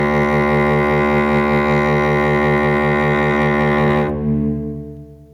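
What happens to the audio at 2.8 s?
At 2.8 s the music is caught in gain pumping that runs through the whole clip: the gain swings by about 10 dB, leaving the sound squashed. The likely cause is excessive input gain with a fast limiter clamping down on every peak.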